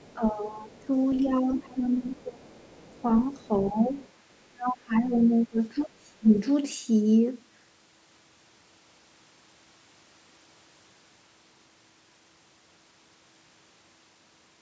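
From 0.0 to 0.14 s a faint second voice sits under the talker, and it returns at 0.74 to 1.2 s, 2.61 to 3.47 s and 4.03 to 4.11 s. This is the other side's voice leaking through, likely residual loudspeaker echo that the canceller missed. It sits roughly 30 to 40 dB below the main speech. Unlike crosstalk or a second person in the room, it arrives in scraps that track the far end's speech.

Alternating with those scraps is speech suppressed in double talk, at 0.15 to 0.91 s, 1.22 to 2.58 s, 3.02 to 3.96 s and 4.5 to 6.3 s. The talker's own voice pumps down by around 20 dB, closer to 10 dB in the third stretch and about 25 dB in the last. The likely cause is the echo canceller turning everything down while both sides spoke. Unlike a network dropout, the dips come from the canceller ducking speech, not from lost packets.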